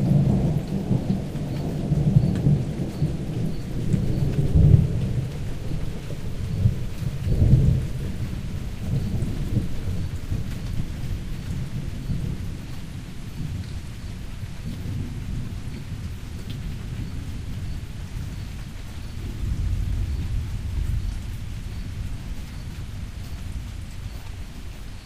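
No technical faults can be heard anywhere in this recording of sounds.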